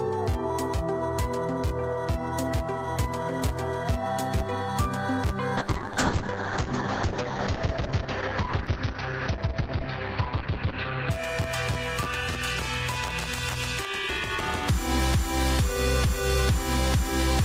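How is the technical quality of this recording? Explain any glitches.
There's one real problem: a call bitrate drop from about 5.57 s to 11.17 s. The link's bandwidth estimate sagged, so the encoder got starved of bits and spent nearly all of that stretch, about 5.5 s, at its floor. You can hear the top end close down from around 20 kHz to roughly 6 kHz, so things go muffled, with a rough, watery texture that fits a fall from about 32 kbps to something near 7 kbps. It clears up once the rate recovers after 11.17 s.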